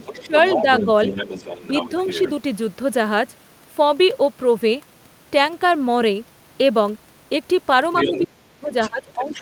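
From 0.0 to 2.31 s, the other side's voice leaks through at roughly 10 dB below the speech, likely residual echo the canceller missed. Between 0.15 and 0.35 s, the speech dips by roughly 10 dB, likely suppressed in double talk. The leak returns more strongly from 7.94 to 8.26 s, only about 5 dB down, likely echo again. From 8.01 s to the end, the speech drops by up to about 20 dB, likely double-talk suppression. A faint scrap of the other side, likely residual echo, appears from 8.73 to 8.89 s, roughly 20 dB below.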